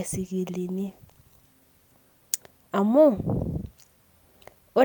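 A call bitrate drop runs from 0.55 s to 2.79 s. The connection's estimate of available bandwidth fell, so the encoder was told to spend far fewer bits on the speech, sliding from 64 kbps down to 27 kbps and staying at that floor for about 1.4 s. With fewer bits the coding becomes coarser, and the speech takes on a rough, watery quality until the bitrate recovers toward the end of that span.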